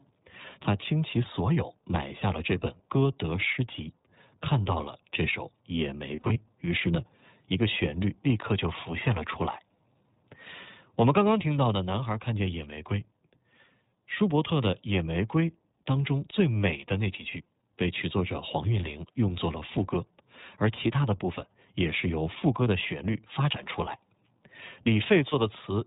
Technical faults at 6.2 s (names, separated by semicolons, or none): iLBC codec; lost iLBC frames